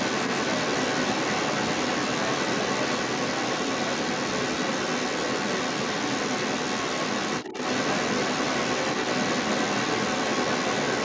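From start to finish, a second voice runs under the talker, the other side's voice leaking through, and it's loud, roughly 10 dB above the main speech. The likely cause is the far end playing on a loudspeaker and the echo canceller leaving much of it behind, all within the call's normal 8 kHz band.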